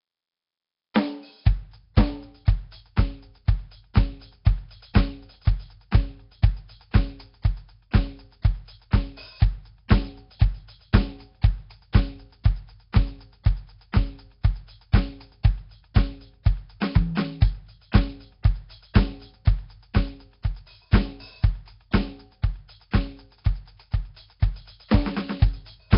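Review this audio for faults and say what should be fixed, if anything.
Throughout the music there is a rough, hissy halo around everything and a smeared, underwater quality, with heavy codec damage and nothing above about 5.3 kHz. The likely cause is Nellymoser compression: the old Flash codec codes short blocks at a fixed two bits per sample, so weak bands get no bits and are filled with noise, and the result fits a rate near 22 kbps. Capture or re-encode from the original source with a modern codec at a higher bitrate, rather than passing it through Nellymoser Asao.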